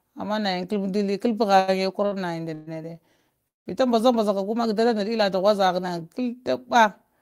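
At 1.59 to 1.70 s and 2.06 to 2.14 s, short stalls from a late packet hold the speech for about 84 ms and then 59 ms while the jitter buffer waits, with a faint buzz or dip. On a spectrogram the harmonics smear flat and unchanging before the sound resumes where it stopped.

Two call audio freezes follow, likely from packets held up in transit. At 2.54 to 2.69 s the last sound is stretched into a fading buzz or hiss for about 129 ms. At 3.48 to 3.68 s it is drawn out, then goes silent for about 160 ms, a blank column on the spectrogram and a flat line in the waveform.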